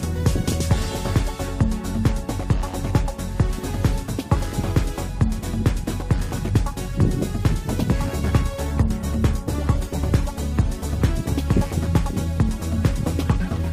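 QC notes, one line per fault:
8.67–11.43 s, call bitrate drop. The audio turns coarse and muffled for nearly three seconds, then clears. The call's bandwidth estimate fell, so the encoder was told to spend far fewer bits, going from 48 kbps down to 18 kbps. At that rate Opus quantises more roughly, which gives the rough, watery texture. It also trims the upper frequencies, so the top end dulls. The lowest rate held for about 2.7 s before recovering.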